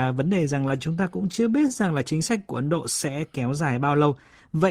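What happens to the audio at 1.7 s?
At 1.7 s the speech is in the middle of repeated stalls (stutter), which run from about 0.59 s to 1.86 s. Packets kept arriving late, so the jitter buffer ran dry 16 times, each time for 16 ms or less, and the receiver stretched the last sound to cover about 159 ms in all, roughly 13% of that stretch. Unlike packet loss, nothing is actually missing: the speech drags and catches rather than dropping out.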